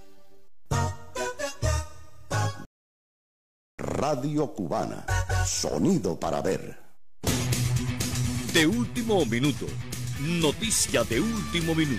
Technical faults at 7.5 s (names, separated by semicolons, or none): none